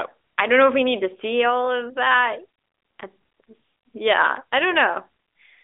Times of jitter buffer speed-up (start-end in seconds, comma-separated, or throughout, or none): none